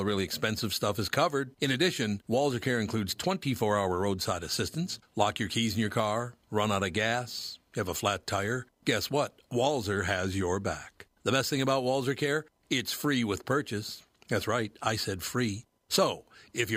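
A speech recording with no technical faults to report. Nothing in the audio points to a problem in how it was captured, processed or delivered.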